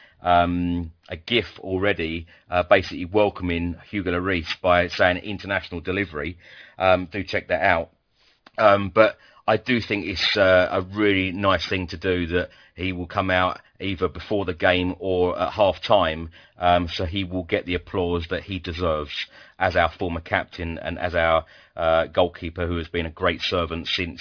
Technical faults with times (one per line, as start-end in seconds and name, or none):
0.00-24.21 aliasing